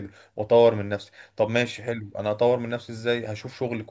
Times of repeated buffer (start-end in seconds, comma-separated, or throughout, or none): none